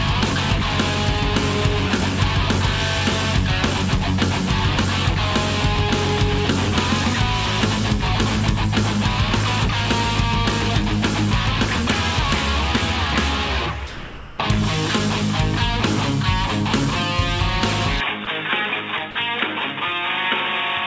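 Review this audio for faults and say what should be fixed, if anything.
At 13.87 to 14.39 s about half a second of sound drops out and is replaced by smooth, steady hiss. There are shorter drops at 18.25 s and from 19.11 to 19.15 s. This is sound dropped by the voice detector. The detector likely mistook quiet passages for background and stopped sending, so the receiver filled the gaps with comfort noise. Lowering the detector's sensitivity, or turning off discontinuous transmission, would prevent it.

From 18.01 s to the end, the sound suddenly turns dull and boxy. Nothing remains above 3.8 kHz, the level falls by about 5 dB, and a different, faint background noise appears. There's no gap at the change. That points to the input switched to a poorer device, because the earlier audio reaches 8 kHz through what sounds like a wideband G.722 call path. Locking the input device for the whole session would prevent it.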